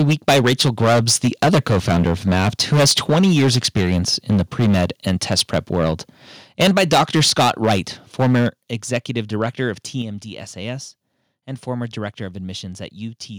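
From 0.00 to 3.99 s the speech carries a harsh, crackling edge on every loud syllable. This is microphone overload, likely from the input volume being set too high, so the peaks drive about 14 dB past the converter's limit and their tops are cut off. A large share of the waveform is flattened.

At 3.10 s the microphone volume is stepped down by about 2 dB, likely by the call software reacting to the clipping. Voice and background drop together in one abrupt step.

The overload returns from 4.29 to 5.94 s, about 9 dB over, with somewhat less crackle. It returns again from 6.60 to 7.79 s, about 12 dB over. At 6.63 s, inside that stretch, there is another step down of about 2 dB, and the distortion carries on past it.

From 8.19 to 8.48 s a short burst overshoots by about 8 dB and is heavily flattened. It is followed straight away at 8.49 s by a larger step down of about 7 dB, a sudden drop in level.

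A brief trace of overload, about 2 dB over, crackles from 8.94 to 8.97 s. A final step down of about 5 dB comes at 10.02 s.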